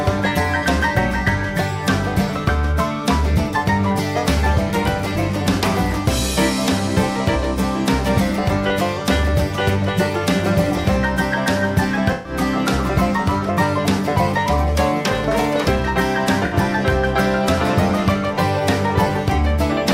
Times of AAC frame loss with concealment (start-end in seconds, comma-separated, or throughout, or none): 12.12-12.33, 16.45-16.53